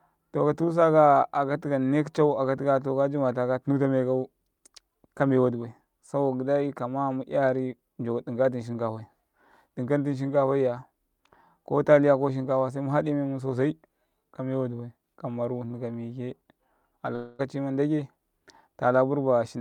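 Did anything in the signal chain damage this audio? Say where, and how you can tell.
Yes: a long network dropout from 17.15 s to 17.41 s, at the network stage. For about a quarter of a second the speech stops being real and turns into a smeared continuation of the preceding sound, a buzzy, hissy tail that fades but never drops to full silence before the speech resumes. That points most likely to a run of lost packets: the receiver's concealment stretched the last good audio across roughly 240 ms, and what was said in that gap is simply gone.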